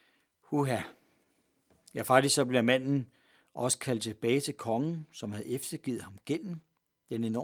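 Throughout the speech, the pacing feels faintly unsteady, with small hiccups that never settle into a regular rhythm. This is clock drift between sender and receiver: the sending device's audio clock runs roughly 4 percent slower than the receiver's. Samples arrive a little too slowly for playback, so the jitter buffer keeps sinking toward empty and the receiver has to fill the gap again and again. The stutters are uneven because each fix waits until the shortfall grows large enough to need one.

From 0.24 s to 7.39 s, there are repeated timing corrections. You hear them as tiny doubled fragments scattered through the speech, which leave the delivery slightly stretched and halting. Each one is the receiver repeating a short slice of sound to pad out the slow stream. Together they play the material at about 96 percent of its pace and add roughly 0.3 s in total. Every edit lengthens the audio, but the intervals between them vary.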